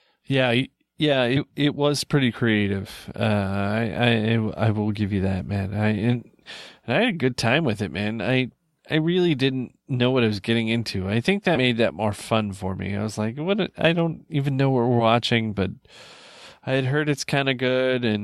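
Compressed frames skipped occur at 2.84–2.88 s, 6.12–6.16 s, 11.55–11.59 s and 14.99–15.03 s. Each time, whole blocks of coded audio never reach the output, so the speech jumps forward by roughly 20, 40, 70 and 20 ms respectively, steps that fit a 10 ms frame length.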